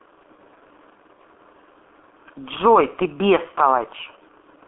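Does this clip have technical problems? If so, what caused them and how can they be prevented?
Yes. Throughout the speech, the G.723.1 codec leaves sound confined to roughly 250 Hz to 3.5 kHz, heavily muffled and hoarse with smeared consonants, which fits a bitrate near 6 kbit/s. Its coarse 30 ms frames add a rough grain that simple band-limiting wouldn't. Prevent it by routing calls through a wideband codec such as Opus at a higher bitrate.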